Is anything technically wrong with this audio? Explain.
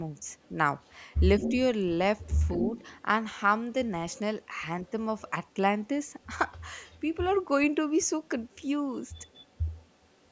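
Yes. The speech has echo leak and speech suppressed in double talk.

Echo leak occurs at 0.37–0.49, 0.83–1.52, 2.19–3.02, 4.13–5.52, 5.86–7.0 and 9.14–10.29 s. A copy of the far-end voice trails by 212 ms. It is faint in most stretches and nearly as loud as the talker at 0.83–1.52 s. Likely cause: a loudspeaker's echo canceller letting its pickup through.

Speech suppressed in double talk occurs at 1.4–1.54 s, during the loud echo. The talker's level dips by about 5 dB for roughly a tenth of a second. The canceller likely confused the talker with the echo and turned both down.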